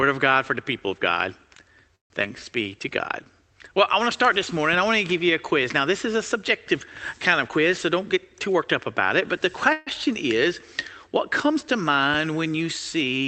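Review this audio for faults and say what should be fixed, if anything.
Call audio freeze at 1.95–2.12 s and 9.73–9.89 s: the sound stops and resumes where it left off, which points to packets likely held up in transit while the jitter buffer ran empty. The first gap, 147 ms, is filled almost entirely with silence. The second, 138 ms, is a fading continuation of the last sound. A larger jitter buffer target on unstable networks would absorb these stalls.

Short concealed packet loss at 2.22–2.25 s: about 40 ms of audio never reached the decoder, and the gap was patched by extending the preceding sound, leaving a brief smear. Forward error correction or redundancy would let the decoder recover such losses.

Jitter buffer slow-down at 2.28–2.46 s: pitch periods were repeated to rebuild the buffer's reserve after the stall, adding 40 ms and stretching the sound to 83% speed. A steadier buffer target would avoid this refill.

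Jitter buffer speed-up at 7.48–8.63 s: short pitch-period pieces were cut to drain excess buffered audio, removing roughly 150 ms and running the sound at 113% speed with unchanged pitch. Spreading the delay reduction over a longer stretch would make it far less audible.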